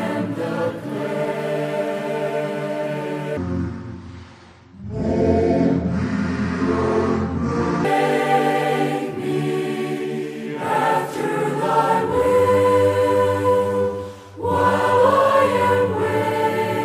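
From 3.37 to 7.85 s, a section plays at the wrong speed, about 0.6 times normal. Pitch drops about ten semitones. A mismatched playback clock is the likely cause.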